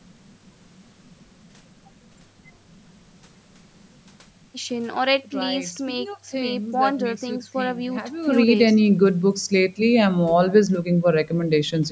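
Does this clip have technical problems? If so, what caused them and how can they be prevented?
No, this clip has no technical problems, so there is nothing to trace back to a cause or to prevent.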